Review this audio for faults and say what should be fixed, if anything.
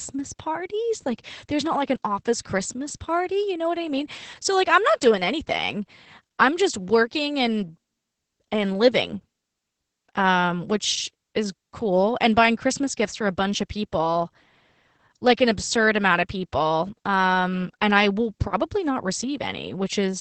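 Opus voice compression throughout: SILK coding cuts everything above 8.5 kHz, and coarse excitation leaves the speech muffled and hoarse, consistent with roughly 10 kbps. Encode at a higher bitrate.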